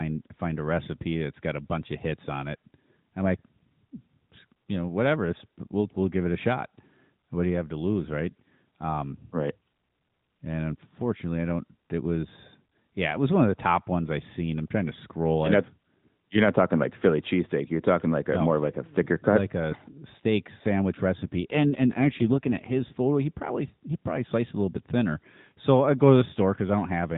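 A speech recording carried over an AMR narrowband mobile path shows an AMR rate drop from 21.22 to 22.93 s, between "like a steak sandwich" and "he probably he probably". The bandwidth holds and nothing drops out, but the speech turns rougher and more synthetic, which points to a step down from about 12.2 to 5.9 kbps as the link trades speech bits for error protection.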